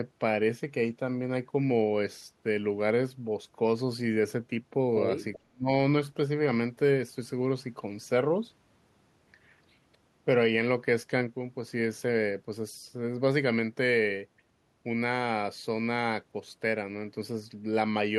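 At 5.35 to 5.39 s a faint delayed copy of the speech surfaces, an echo leak arriving about 392 ms behind the original and quite low, well under the direct speech. It is likely loudspeaker pickup on the far end that the echo canceller failed to remove and sent back.

From 5.42 to 5.69 s the speech is speech suppressed in double talk: it dips very deeply for roughly 0.3 s in total. With both sides active, the canceller likely mistook the talker for echo and attenuated both.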